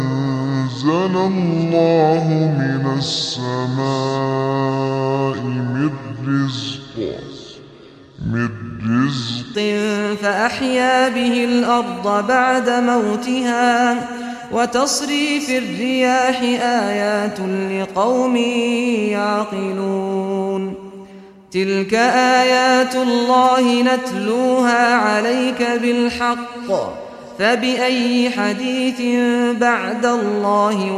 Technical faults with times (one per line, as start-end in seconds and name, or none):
0.00-9.55 section at the wrong speed